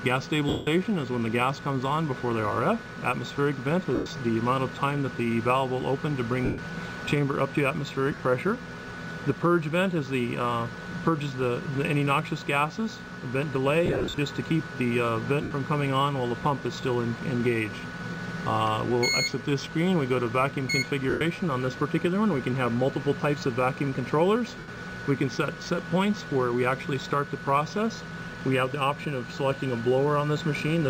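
Short stretches turn into a noisy, smeared hiss that briefly replaces any tonal content, at 0.49 s (180 ms), 3.95 s (110 ms), 6.45 s (130 ms), 8.12 s (scattered gaps over 80 ms), 13.86 s (scattered over 320 ms), 15.43 s (80 ms), 21.10 s (110 ms) and 24.59 s (90 ms). These are lost LE Audio frames: the LC3 decoder refills each gap by repeating the last spectrum with random signs and fading it, which fits 10 ms frames. The light codec softening underneath is normal.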